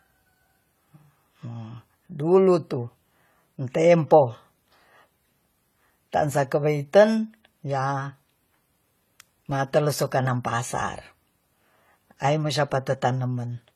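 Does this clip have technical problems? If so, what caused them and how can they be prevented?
Yes. Throughout the speech, the top end stops abruptly at 15.1 kHz, and two different kinds of coding artefact are heard together. This points to transcoding between lossy codecs, likely an AAC-LC encode at around 32 kbit/s that was re-encoded as HE-AAC at around 48 kbit/s. The second codec spent its bits reproducing the first one's damage, added its own, and the low cut-off carried through. To prevent it, encode only once, directly from the original uncompressed source.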